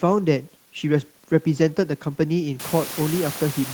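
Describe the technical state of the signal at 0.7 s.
At 0.7 s the speech signal is intact, with no technical fault present.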